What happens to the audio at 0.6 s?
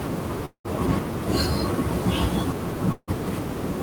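At 0.6 s the audio sits inside a long network dropout running from 0.45 to 0.66 s. A stretch of packets likely never arrived, so the receiver stretched the last sound into a fading buzz before about 100 ms of silence, and speech resumes with roughly 200 ms missing.

Throughout this moment, sample clock jitter is also present. The converter's clock wanders by around 5 microseconds, so samples land slightly off time. On steep parts of the waveform this adds a gritty hiss about 25 dB below the speech.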